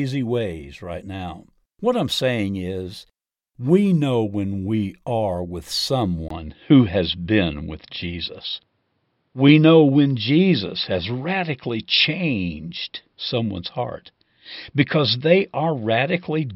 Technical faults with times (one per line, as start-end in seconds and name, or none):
6.28-16.55 input switched to a poorer device